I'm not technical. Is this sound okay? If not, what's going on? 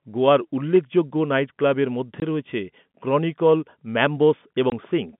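No, there are two tiny dropouts, at 2.20 to 2.22 s (between "গোয়ার উল্লেখযোগ্য নাইটক্লাবের মধ্যে" and "রয়েছে ক্রনিকল") and 4.70 to 4.72 s. This is packet loss filled with silence: one 20 ms chunk of the call went missing each time, so you hear a brief gap.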